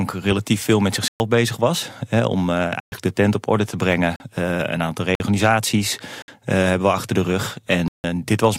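The program likely failed repeatedly to fill its output buffer in time, so this speech has six blocks of digital silence: 1.08–1.2 s, 2.8–2.92 s, 4.16–4.2 s, 5.15–5.2 s, 6.22–6.28 s and 7.88–8.04 s. Each hard cut leaves holes of 40 to 160 ms.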